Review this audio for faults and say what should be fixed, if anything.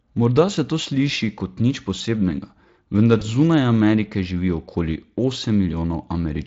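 A burst of VoIP packet loss concealed by the speech codec hit at 3.19 s, lasting until 3.24 s. About 20 ms of data went missing, which fits a single lost Speex frame. The decoder filled the gap by extending the previous pitch and spectral shape at falling gain, so the speech briefly smears into a fading tone or noise. Because each decoded frame depends on the one before, the sound stays weak or distorted for tens of milliseconds or more after packets resume at 3.24 s. The light Speex coding around it is at 23.8 kbps. Adding forward error correction or redundant frames, along with a slightly deeper jitter buffer, would let the receiver recover this frame instead of concealing it.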